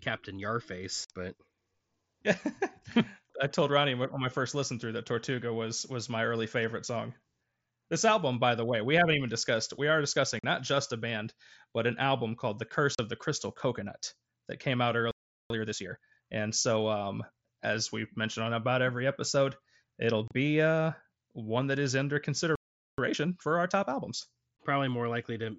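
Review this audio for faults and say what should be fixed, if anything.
Unconcealed Bluetooth headset packet loss leaves four short, hard-edged holes in the speech at 1.05–1.10 s (about 52 ms), 10.39–10.44 s (45 ms), 12.95–12.99 s (about 38 ms) and 20.28–20.31 s (30 ms), the last between "about every episode it'll" and "uh one that is". Each gap fits a handful of 7.5 ms mSBC frames dropped on the air link and replaced with silence rather than concealed. The mSBC codec's light graininess is audible on loud sounds. The gaps are far briefer than a stall, and the speech resumes at normal speed with nothing hurried afterwards. Enabling packet-loss concealment and reducing radio interference between headset and phone would prevent them.

A playback stall cuts the sound off mid-flow at 15.11–15.50 s (about 390 ms) and again at 22.55–22.98 s (about 430 ms), right after "one that is under". The output simply goes silent and then carries on, most likely because the player's buffer ran dry or its thread was blocked. 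Unlike the packet-loss holes, these silences last for nearly half a second, and each is followed by rushed catch-up audio. Larger playback buffers and keeping the audio thread free of blocking work would prevent them.

Time-compressed catch-up follows each stall. The audio runs at 1.5× from 15.50 to 16.28 s and at 1.25× from 22.98 to 24.68 s, still after "one that is under". The player drains its backlog by removing small slices and cross-fading across them, so pitch stays normal while the pace is hurried. This differs from a plain speed-up, which would raise the pitch. Preventing the stalls removes the need for it, and dropping the backlog instead of compressing it avoids the rush.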